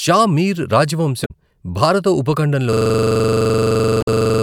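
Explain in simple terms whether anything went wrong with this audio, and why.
Yes, two things go wrong. Around 1.22 to 1.31 s the speech is broken by a short blip. That is damaged data in a compressed stream. Part of the stored file was corrupted, so the playback software couldn't decode that stretch. It lost its place and jumped forward to the next spot it could read. The same kind of glitch appears again from 3.99 to 4.08 s, as a short blip on top of the stutter described next.

From 2.73 s to the very end, the speech stops moving forward and turns into a rapid, buzzy stutter. One slice of sound about 43 ms long repeats roughly 40 times, at about 23 repeats per second. That is a system hang loop. The computer froze, but the sound hardware kept replaying the same small chunk of memory over and over. The length of the repeated slice fits a 2048-sample buffer.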